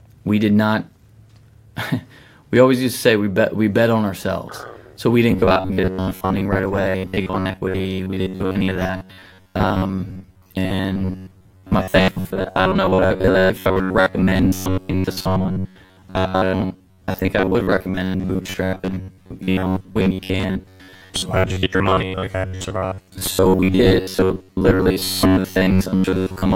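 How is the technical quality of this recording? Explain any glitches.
Not great: from 5.31 s to the end the speech turns into robotic sound from repeated short buffers, a rigid metallic buzz near 94 Hz. It's likely caused by starved playback looping roughly 10.7 ms chunks for most of the audio.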